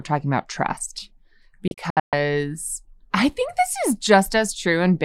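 A speech recording with a digital broadcast dropout between 1.68 and 2.13 s: the receiver muted on corrupt frames, leaving several short silent holes totalling 256 ms (longest 128 ms), consistent with about eight lost frames. Spectrogram and waveform show sharp-edged blank columns, with 3 ms fades.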